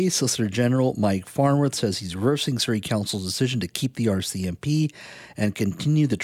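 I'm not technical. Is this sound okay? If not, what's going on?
Yes, nothing in this speech recording points to a technical problem. There's nothing here that needs fixing.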